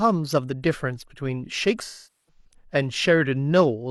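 From 1.83 to 2.45 s there is AAC frame loss with concealment. Over about 0.6 s, ten frames (about 0.43 s of audio) are lost and the decoder repeats the last good spectrum, producing a smeared, noisy tail that sinks toward silence and fades back in. A plain dropout would cut off abruptly instead.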